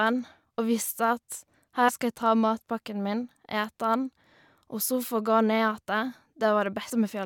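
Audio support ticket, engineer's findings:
Compressed frames skipped at 1.88 s and 6.9 s: speech jumps ahead by about 100 ms, then about 150 ms, consistent with roughly four and seven 21.3 ms frames dropped at the decoder.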